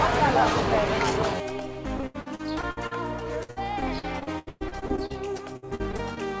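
Audio carried over a call path with nothing above 8 kHz, consistent with a wideband codec such as G.722, shows repeated packet loss (robotic sound) from 1.97 to 2.93 s and again from 3.43 to 6.19 s. Each missing packet is concealed by stretching the preceding sound forward, so the audio turns choppy with pieces missing. About a third of the first stretch is patched, with gaps up to 76 ms. Just over a quarter of the second stretch is patched, with gaps up to 118 ms.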